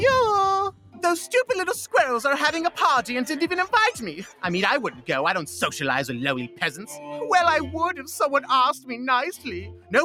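From start to finish a noise suppressor built for speech is running on this sound, treating steady tones and tails as noise. Levels swing by around 5 dB, so held material pumps and thins while sharper onsets get through. The sound is cut by the noise suppressor three times: 0.72 to 1.03 s, 4.92 to 5.09 s, and 9.73 to 9.92 s. Each time it dips by up to about 11 dB, so the sound briefly sinks and its decay gets clipped short.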